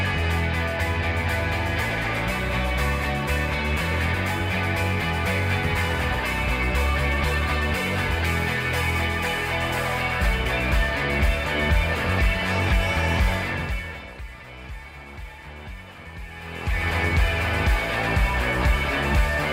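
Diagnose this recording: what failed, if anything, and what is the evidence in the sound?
Nothing failed in this recording, and the sound gives no evidence of any fault.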